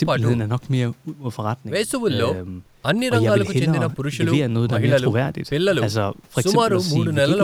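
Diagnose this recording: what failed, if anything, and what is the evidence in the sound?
Nothing failed in this recording.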